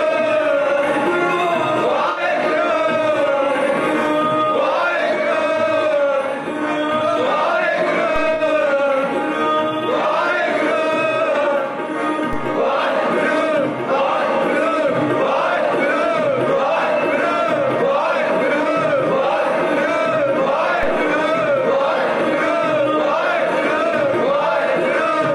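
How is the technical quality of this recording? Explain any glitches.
The recording has two kinds of glitch: short dropouts from a corrupt frame concealed by the decoder, and a few DC steps.

Corrupt frame concealed at 2.10–2.20 s, 8.34–8.41 s, 18.63–18.66 s and 23.90–23.94 s. Damaged AAC frames were detected and the decoder patched over them, muting or reusing a scrambled last-good spectrum. The lengths fit roughly one to three frames.

DC step at 8.16 s, 12.33 s and 20.83 s. The waveform's zero line suddenly jumps, then drains away through what behaves like a 2 Hz high-pass. Each one lands as a low thump or click, while the sound itself carries on unchanged.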